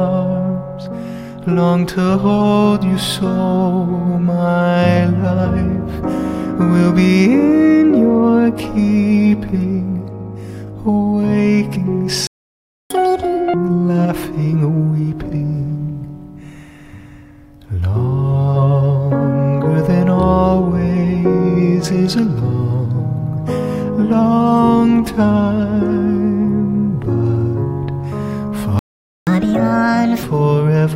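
At 12.27 s the sound cuts out abruptly in mid-flow and stays silent for about 0.63 s, until 12.90 s: a playback stall, likely the player running out of buffered data or its output thread being blocked. When audio resumes, from 12.90 to 13.54 s it runs at double speed with pitch pushed up by nearly an octave. This is catch-up at higher speed, with the player resampling its backlog quickly to recover lost time before dropping back to normal. The same pattern returns at 28.79 s, with another playback stall, likely from the same starved or blocked output, leaving about 0.48 s of silence. From 29.27 to 30.23 s the catch-up runs at 1.5 times speed, raising pitch by roughly seven semitones before settling.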